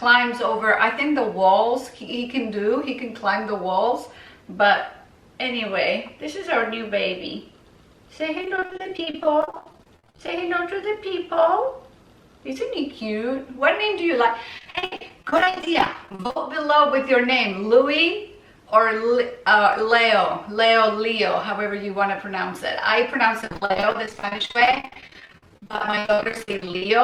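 Repeated packet loss (robotic sound) hits at 8.41–10.28 s, 14.58–16.37 s and 23.42–27.00 s. Dozens of short holes, the longest 71 ms, get patched by stretching the previous sound. That makes it choppy, with pieces missing, worst in the last stretch, where nearly half is filled in.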